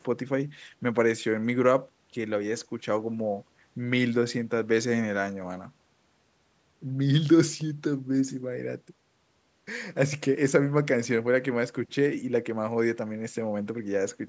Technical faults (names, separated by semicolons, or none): none